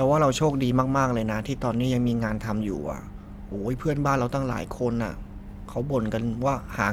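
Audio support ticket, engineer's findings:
No audible faults found in the speech recording; nothing to escalate.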